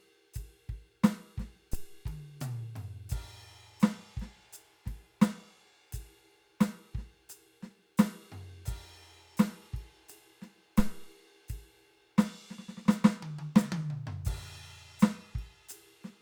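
A deep, low thump cuts into the music at 1.73 s and again at 10.79 s, decaying in about 51 ms and 55 ms. This is a phantom power thump: a supply switched on or off on a live input sends a voltage step through the coupling capacitors.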